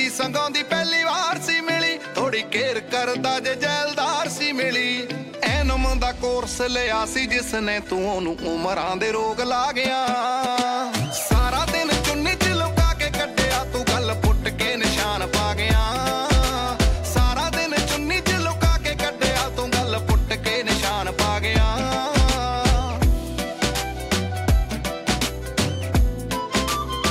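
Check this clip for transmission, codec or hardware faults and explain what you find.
No transmission, codec or hardware faults are evident anywhere in the recording.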